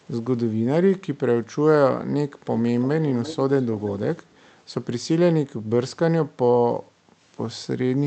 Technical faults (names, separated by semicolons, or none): echo leak; background gated by the echo canceller